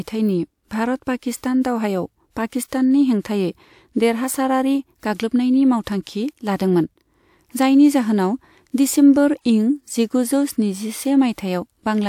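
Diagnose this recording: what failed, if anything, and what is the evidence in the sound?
The codec stage failed here, producing pre-echo near the end of the speech. From about 11.33 s to 11.38 s, a short hiss rises for roughly 54 ms ahead of a sharp onset, and the attack itself sounds softened and smeared. The transform codec sized its quantisation noise for the loud part of a block, and because the onset arrived late in that block, the noise spilled backward into the quiet stretch just before it.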